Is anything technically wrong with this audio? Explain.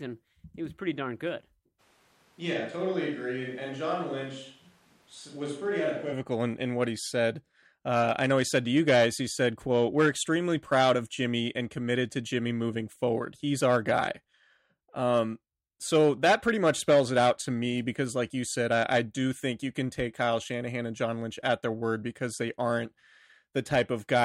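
Yes. From 1.81 to 6.11 s, right after "was pretty darn good" and until "in in what he", the close mic's signal likely dropped out, causing a switch to a distant microphone. The speech turns suddenly roomy, hollow and thin, about 5 dB quieter, with room noise roughly 30 dB below it.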